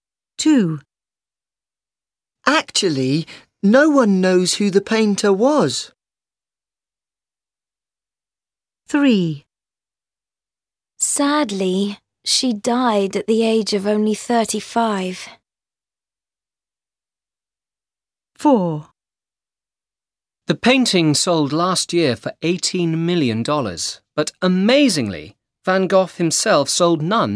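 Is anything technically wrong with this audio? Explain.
No, nothing technically wrong can be heard in this audio. There is nothing here that calls for a fix.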